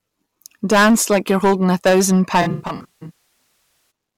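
Throughout the speech, some stage in the chain was driven about 14 dB past what it could pass, so the waveform peaks were sliced flat. That is hard clipping, and at this level about one sample in twenty sits on the ceiling. The squared-off tops add strong upper harmonics, so every louder syllable carries a harsh, gritty fuzz rather than occasional crackle, and the distortion rises and falls with the level of the speech.

From 2.41 s to 3.15 s, the AAC stream lost frames in scattered bursts, and the decoder had to invent the missing audio from the last spectrum it had received. This is AAC frame loss with concealment. The gaps don't arrive as one block: the longest run is around 150 ms. What you hear is a stretch of smeared, noisy, phasey speech where the detail of the sound washes out before it returns to normal decoding.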